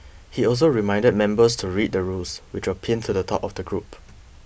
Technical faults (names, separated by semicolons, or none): none